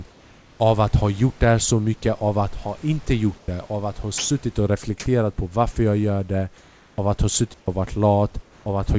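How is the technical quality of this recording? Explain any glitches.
The recording carries three kinds of glitch, each short: background swaps to synthetic noise, a piece of speech is replaced by noise, and one clean mute. The speech has nothing above 8 kHz, which fits a G.722 call path, and there is steady room noise about 32 dB below the speech.

Comfort noise in place of the background occurs at 3.38–3.48 s, 6.58–6.98 s and 8.42–8.66 s. In these pauses the real room background, sitting about 28 to 32 dB below the speech, gives way to a smooth, featureless hiss that is quieter by about 4, 1 and 3 dB respectively. The likely cause is discontinuous transmission: the sender stops sending during silence, and the receiver generates shaped noise instead. On a spectrogram these stretches look uniform and grainless, with the fine texture of the surrounding background missing.

Sound dropped by the voice detector occurs at 4.18–4.30 s, where 120 ms of speech is lost and steady noise fills the gap. 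The sender's voice detector likely judged this quiet stretch to be background and stopped transmitting, so the receiver substituted comfort noise until speech resumed. On a waveform the speech envelope collapses abruptly to a flat, low noise band. On a spectrogram the harmonic structure vanishes for that slice.

A digital wireless dropout occurs at 7.54–7.68 s: a clean 140 ms hole of near silence with no click or burst of noise on either side. The wireless link lost too much data, and the receiver muted behind a very brief fade rather than play corrupted audio. On a waveform this is a near-flat gap with tapered edges. On a spectrogram it appears as a dark vertical band across all frequencies.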